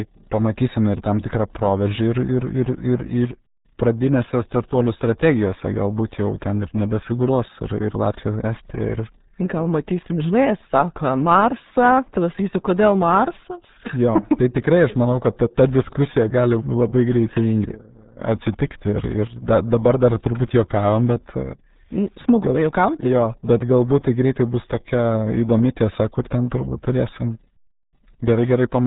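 Throughout, the speech carries RealAudio 14.4 codec damage: nothing above 3.8 kHz survives, leaving it muffled and gargly, with an 8 kbit/s modem-era warble rather than plain low-pass dullness.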